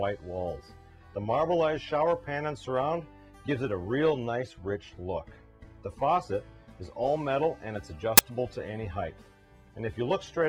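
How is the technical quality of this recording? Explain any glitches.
The recording has one clear glitch. At 8.18 s there is a very brief burst of static, lasting about 14 ms. It is file tags played as audio. The file carries an embedded cover picture. Here that block of picture data was fed to the decoder as if it were sound. Compressed image bytes look random, so they come out as very loud white noise. The burst starts and stops with hard edges. It is loud and harsh despite being so short.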